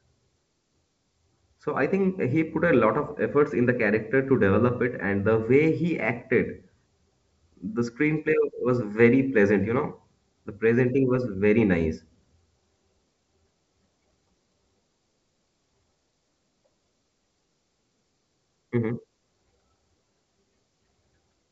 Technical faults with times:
none

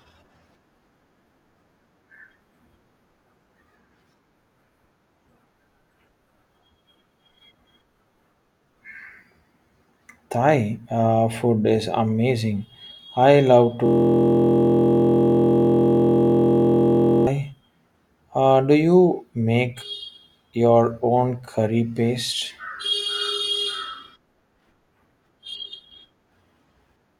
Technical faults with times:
13.86-17.27 system hang loop

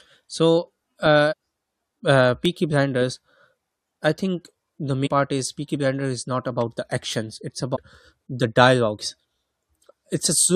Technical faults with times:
1.31-1.33 damaged data in a compressed stream
2.45 electrical switching spike
5.05-5.07 damaged data in a compressed stream
6.61 electrical switching spike
7.74-7.77 damaged data in a compressed stream

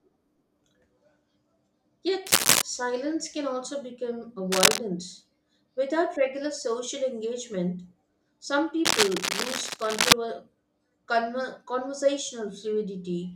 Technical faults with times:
2.26-2.63 cable scratch noise
4.52-4.79 cable scratch noise
8.85-10.14 cable scratch noise

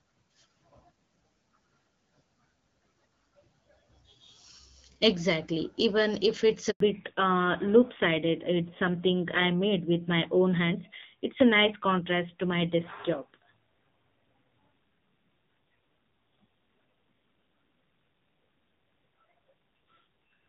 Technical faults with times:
6.70-6.80 handover gap
6.80-20.49 fallback to narrowband

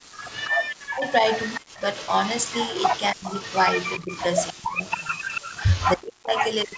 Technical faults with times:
0.00-0.12 background gated by the echo canceller
0.12-0.50 echo leak
0.79-1.64 speech suppressed in double talk
1.09-5.91 echo leak
3.13-3.35 speech suppressed in double talk
4.04-6.78 speech suppressed in double talk

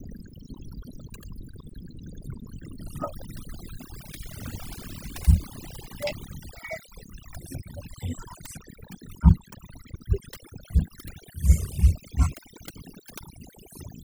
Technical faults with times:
0.00-14.04 overdone noise removal

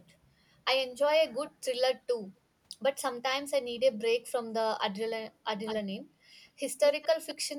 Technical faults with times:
1.47-1.51 echo leak
3.94-4.01 echo leak
5.65-5.80 echo leak
6.82-7.35 echo leak

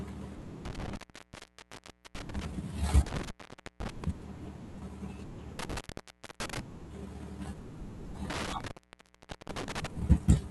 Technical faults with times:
0.65-2.45 intermittent contact
3.06-4.04 intermittent contact
5.59-6.59 intermittent contact
8.30-9.87 intermittent contact

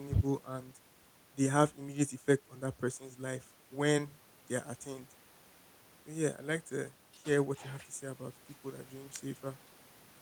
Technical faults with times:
none

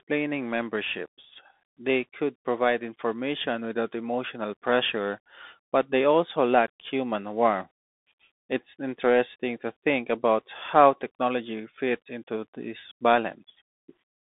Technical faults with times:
0.00-14.36 Bluetooth CVSD headset codec

